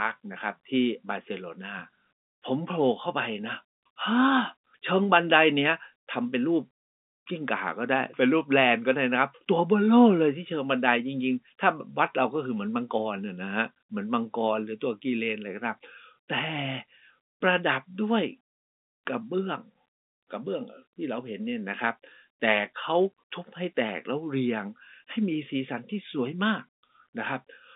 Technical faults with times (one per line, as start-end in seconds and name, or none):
none